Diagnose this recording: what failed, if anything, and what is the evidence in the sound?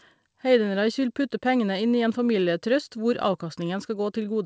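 The sender's audio clock ran about 3 percent slower than the receiver's, a clock drift between sender and receiver at the buffer stage. The receiver's jitter buffer kept draining, so the speech carries faint timing hiccups at uneven intervals throughout, over a band ending near 8 kHz that fits a wideband call codec.

From 0.20 s to 4.26 s the receiver made repeated timing corrections, repeatedly duplicating short pieces to cover the missing samples. Playback runs at 96 percent speed, adding roughly 150 ms overall, heard as a slightly slow, unsteady tempo with small stutters.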